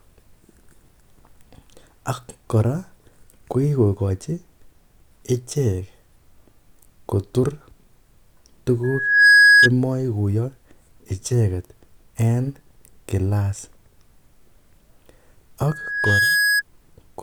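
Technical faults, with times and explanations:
8.83–9.69 s and 15.68–16.62 s, loudspeaker feedback squeal: A single tone near 1.7 kHz swells within about half a second. The microphone re-amplifies its own loudspeaker at that frequency. It peaks about 10 dB above the speech, then about 5 dB.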